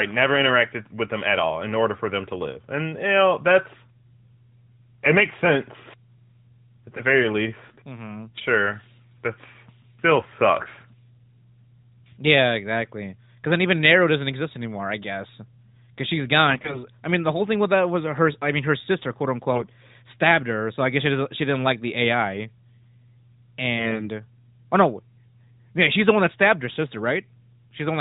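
AMR bit errors strike at 7.68–7.78 s, 16.50–16.84 s, 19.52–19.72 s and 23.78–24.09 s. Over a poor link, a sizeable share of the weakly protected bits in each narrowband frame (coded at a rate consistent with 12.2 kbps) was corrupted while the core bits passed their check. Misplaced excitation pulses and wrong fine gain and spectral values leave pitch and loudness roughly intact but make the speech briefly hoarse, scratchy and gargling.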